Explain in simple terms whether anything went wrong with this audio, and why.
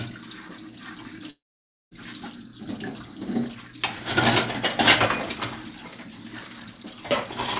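Something went wrong at 1.3 s. The sound cuts out and does not return until about 1.93 s. Right at the break, the last bit of sound is stretched into a short fading buzz. After that comes about half a second of near silence. When the audio resumes, roughly 0.6 s of it is simply gone. This is most likely a long network dropout. The audio stopped arriving, and the receiver covered the gap as best it could. Through the call line, which keeps nothing above 4 kHz, the sound stays dull throughout.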